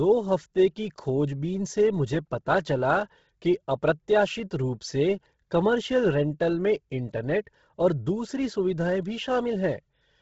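Throughout, the speech sounds breathy and grainy with nothing above 7.7 kHz, likely heavy Bluetooth LC3 compression at a low bitrate noise-filling the upper band.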